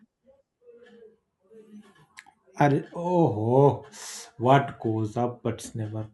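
No technical faults can be heard in this speech recording.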